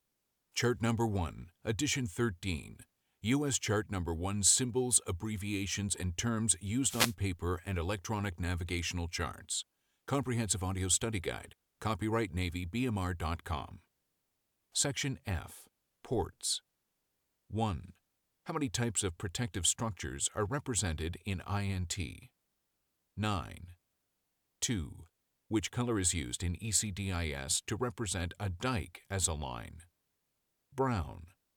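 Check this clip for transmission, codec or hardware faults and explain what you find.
One fault in this speech. From 6.84 to 7.15 s there's a wireless microphone noise hit: the FM radio link fades as reflections cancel, so receiver noise surges into a brief static swish.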